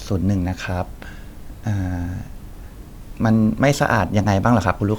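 No faults are audible anywhere in the speech recording.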